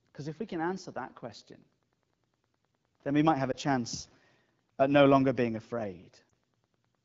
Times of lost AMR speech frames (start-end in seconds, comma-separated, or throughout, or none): 3.51-3.55, 6.29